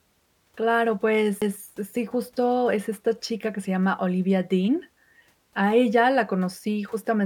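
A CD skip at 1.41 s, just before "sí justo es esta": a knock or disc flaw threw the laser onto a different turn of the spiral, so playback mutes for roughly 10 ms, ticks, and resumes the speech from a displaced point.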